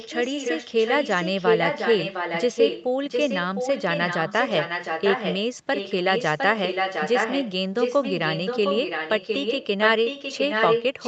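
From the start to 5.39 s, a second copy of the speech trails the first by about 0.71 s. It sits only a few decibels below the direct sound, so it is easy to hear. It drops out briefly, then returns from 5.74 to 7.53 s and again from 7.79 s to the end. This is echo leak. A loudspeaker on the far end likely fed its own microphone, and the echo canceller let part of that copy back through.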